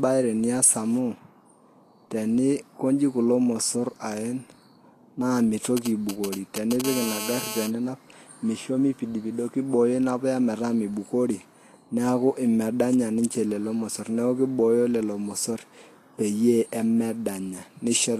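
From start to finish the speech has a hissy, grainy texture: the top end is dull, with nothing above 14.2 kHz, and what treble remains is rough and noisy, with consonant attacks smeared. This is likely Vorbis compression at a low setting, around 37 kbps by the sound of it. The coder lowered its cut-off and quantised the upper residue so coarsely that fine detail became noise of similar energy, and the damage is plainly audible.

From 5.77 to 6.82 s a galloping dit-dit-dit pattern of short buzzes breaks in, only a few decibels quieter than the speech. These are GSM signalling bursts. A nearby 2G phone was exchanging brief groups of radio bursts with the network, in its signalling phase before a call, and the audio circuit rectified those pulses into clusters of sound at the 217 Hz burst rate.

Straight after, from 6.84 to 7.68 s, the ticking turns into a continuous hard, raspy buzz at 217 Hz, rich in harmonics and about 7 dB below the speech, bearing no relation to it. 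This is GSM phone buzz. The same phone had moved into a call and was now transmitting bursts steadily, 217 times a second, which the circuit demodulated into an unbroken tone.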